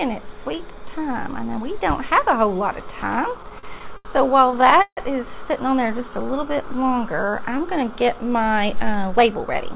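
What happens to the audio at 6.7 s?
At 6.7 s the jitter buffer is partway through a slow-down that runs from 5.79 to 8.55 s. Short of reserve, it repeats single pitch periods to stretch the stream by 238 ms, so the audio plays at 92% speed with unchanged pitch and sounds audibly drawn out.

The same moment falls at the end of a run of scattered short gaps from 5.87 to 6.74 s. About seven lost or late packets, none longer than roughly 15 ms, are patched by extending the last sound, leaving brief ticks and small smears.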